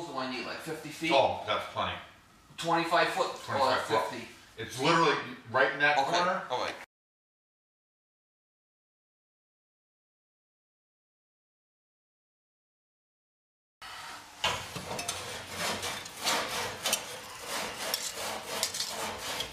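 No technical faults can be heard anywhere in the audio.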